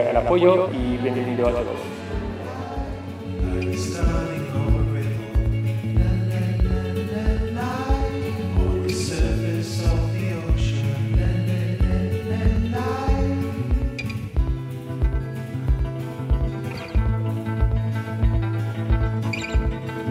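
From start to finish, every sound is trailed by a second copy about 5 dB quieter, roughly a tenth of a second behind, a dry, flat echo with no decay. This doubled audio track likely comes from the same signal being captured twice through paths with different delays.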